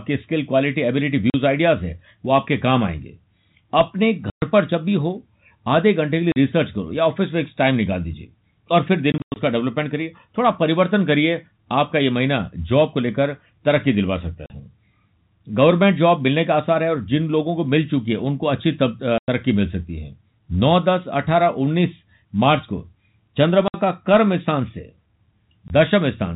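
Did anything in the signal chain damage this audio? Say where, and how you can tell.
Yes. The damage happened in the network: packet loss filled with silence. Lost packets were replaced with silence, so the speech has hard-edged gaps at 1.30–1.34, 4.30–4.42, 6.32–6.36, 9.12–9.36 (a scattered burst with its longest hole about 100 ms), 14.46–14.50, 19.18–19.28, 23.68–23.74 and 25.68–25.70 s. Each gap is a multiple of 20 ms, which fits 20 ms packets. The G.711 telephone band, cut off at 4 kHz, carries on around those gaps unchanged.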